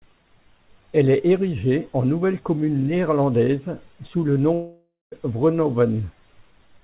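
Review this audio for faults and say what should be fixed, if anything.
Long network dropout, 4.54 to 5.14 s: the speech stops, and the receiver stretches the last sound into a fading buzz. About 0.19 s of near-silence follows, then speech resumes with about 0.58 s gone, likely because packets never arrived. A steadier network link with packet redundancy or forward error correction would prevent it.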